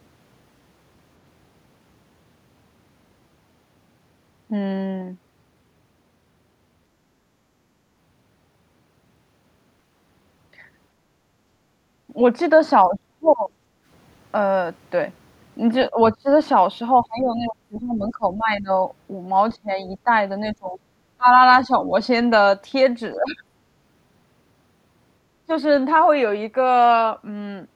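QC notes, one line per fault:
12.08–12.13 s, 12.84–13.54 s, 15.90–16.28 s, 17.01–18.69 s, 19.62–21.73 s and 23.15–23.46 s, speech suppressed in double talk: the echo canceller likely mistook near-end talk for loudspeaker echo while both sides spoke and pulled the whole signal down. The voice dips or breaks into pieces. The first dip is a brief, shallow nick of about 10 dB. The one near 13 s is the deepest, close to a dropout. The longer runs near 17 and 20 s lose chunks across more than a second.
13.82–13.86 s, background gated by the echo canceller: with the loudspeaker active, the canceller clamped the microphone path hard. The room tone ducks by about 9 dB for roughly 40 ms and then springs back when the canceller releases. The result is a short hole in the background rather than a change to the voice itself.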